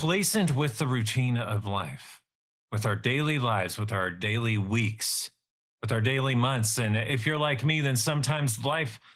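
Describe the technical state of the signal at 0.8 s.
At 0.8 s the speech sounds hoarse and faintly robotic, a coarseness present across the whole clip. This is Opus voice compression in hybrid mode, its linear-prediction layer coarsely coding the excitation below 8 kHz, consistent with a low bitrate near 16 kbps.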